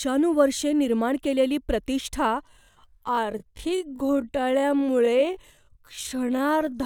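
Software likely stretched the final stretch of this speech to fill a longer slot, padding it by repeating short slices while holding pitch steady. From 2.39 s, right after "निर्माण केलेली प्रतिष्ठा", to the end, this time-stretched section drops abruptly to about 0.57 times normal pace and drags at unchanged pitch.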